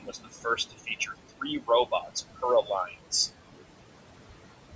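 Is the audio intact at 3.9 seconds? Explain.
No, noise suppressor artifacts run through the whole clip, including 3.9 s: frame-by-frame gain cuts push the room noise down by about 21 dB between words, so it pumps.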